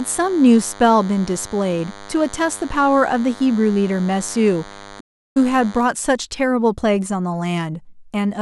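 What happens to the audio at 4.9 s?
A nearby DECT cordless phone or base station is sending a short radio burst every 10 ms, and the audio circuit rectifies it. The result is a steady, thin 100 Hz buzz with many harmonics, about 20 dB below the speech, present from 0 s to 5.82 s.

Just after, at 5.00 s, a playback stall begins. The player most likely ran out of data or had its thread blocked. The output falls silent for 0.35 s, until 5.37 s, before the speech carries on.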